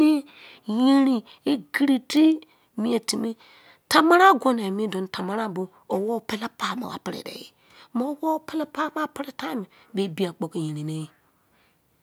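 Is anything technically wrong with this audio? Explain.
Yes. Bit error spike at 2.17 s: a single flipped bit throws one sample's value off by a power of two before it snaps straight back. Peaking around -14 dBFS, it sounds like a sharp, full-band tick unrelated to the speech around it.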